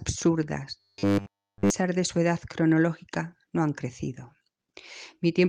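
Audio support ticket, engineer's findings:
Robotic sound from repeated short buffers, 0.80–1.70 s. Rigid metallic buzz at 100 Hz, so each repeat is about 10 ms. Repetition throughout the span, with fresh audio skipped. Likely an input buffer underrun, with the stack looping its last chunk.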